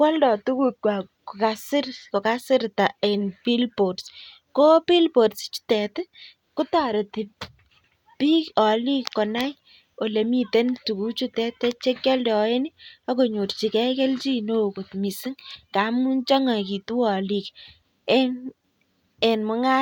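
No technical faults can be heard anywhere in this recording. There is nothing to mark at any point in the audio.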